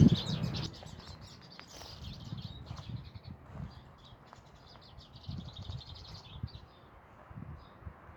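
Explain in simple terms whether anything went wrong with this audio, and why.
At 0.66 s the sound and its background suddenly drop much quieter and stay that way: a sudden gain jump, likely a volume setting changed instantly without a smooth fade.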